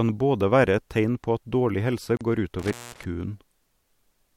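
A speech clip with two separate dropouts close together. At 2.17 s, just after "på at dårlig helse", a 38 ms gap opens in the sound, until 2.21 s. This is a gap at a join of encoded pieces. Two separately encoded segments were butted together untrimmed. The encoder's start-up delay and last-frame padding both survive as silence. The edges are smeared by the codec. The speech then resumes where it left off. From 2.59 to 3.05 s, after "at dårlig helse går", comes an intermittent contact. A loose plug or cable breaks the circuit briefly. The signal cuts out for about 203 ms, with crackle at each edge. While the line is open, faint hiss remains.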